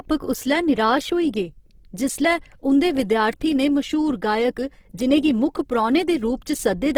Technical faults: Opus compression

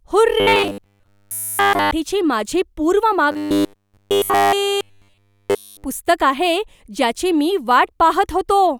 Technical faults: robotic sound from repeated short buffers

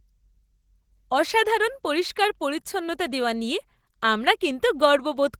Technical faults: Opus voice compression

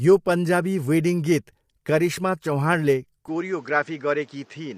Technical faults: low-delay AAC compression; input switched to a poorer device

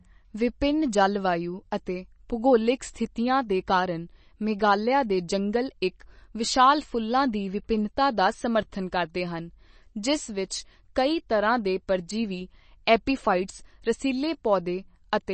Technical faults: MP3 compression

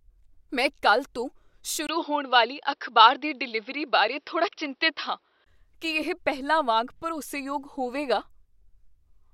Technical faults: input switched to a poorer device

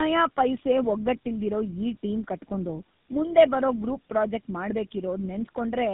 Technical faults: tandem speech coding

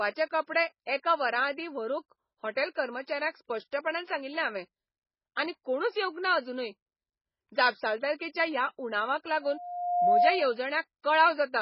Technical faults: MP3 compression; loudspeaker feedback squeal

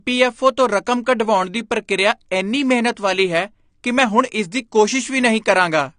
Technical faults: AAC compression

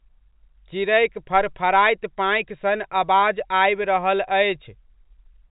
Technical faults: none

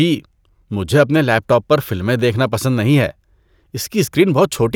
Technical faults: none

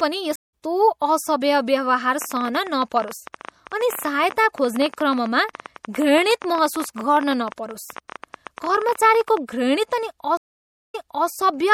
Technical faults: MP3 compression; stream reconnect; train of clicks

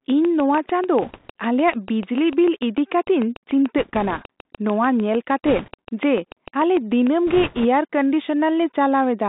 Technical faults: Bluetooth CVSD headset codec; train of clicks; bit errors on a Bluetooth voice link

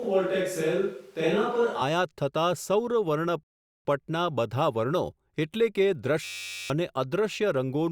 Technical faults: switch to a distant microphone; rebuffering stall; system hang loop

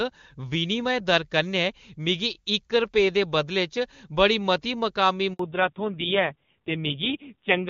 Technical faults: handover gap; fallback to narrowband

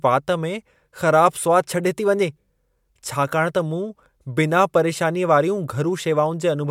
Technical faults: none

